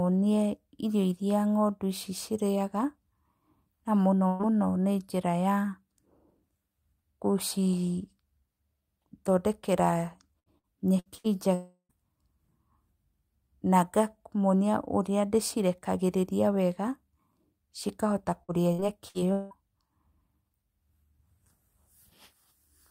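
A burst of packet loss at 4.27 to 4.42 s removes about 120 ms of speech. The receiver stretches the last sound into a fading fill before the speech resumes further on.

Repeated packet loss (robotic sound) runs from 10.39 to 11.27 s. Four gaps, the longest 66 ms, are each patched by continuing the previous sound, leaving choppy speech with about 28% of the stretch filled in.

From 11.54 to 11.92 s the speech gives way to a fading buzz or hiss, then about 70 ms of silence, with roughly 0.36 s lost. The likely cause is a long network dropout.

Repeated packet loss (robotic sound) returns from 18.43 to 19.54 s. Four gaps, the longest 181 ms, are concealed by continuing the last sound, so about a third of the span is choppy fill with pieces missing.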